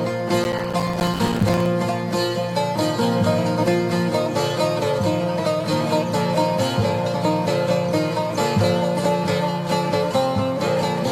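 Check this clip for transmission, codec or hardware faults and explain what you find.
One fault is present: processor overload crackle from 0.44 to 1.66 s. For about 1.2 seconds the processor repeatedly fails to deliver its small buffers on time, each lasting around 5 ms, and every missed one is left as silence. Dozens of these tiny dropouts with hard edges produce a gritty, tearing crackle over the sound. On the waveform the span looks chopped by many short flat gaps. A spectrogram shows dense vertical broadband streaks that stop abruptly after 1.66 s.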